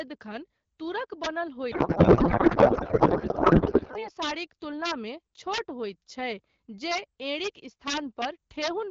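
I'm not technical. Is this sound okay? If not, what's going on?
No. Two things are wrong. From 1.71 to 4.09 s there's a codec payload misread: the receiving end unpacks the compressed speech the wrong way, so it turns into garbled, warbly noise. Throughout, an integer overflow makes the loudest bits, roughly one in a hundred samples, wrap around instead of capping, causing harsh cracks. Outside the garbled stretch, the HD Voice compression itself sounds clean.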